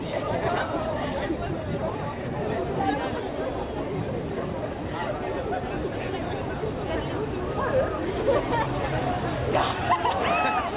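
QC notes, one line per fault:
Nothing to flag here: the audio came over a WebRTC call path with G.711 mu-law at 64 kbps, so there's nothing above 4 kHz, which is simply how that codec carries sound.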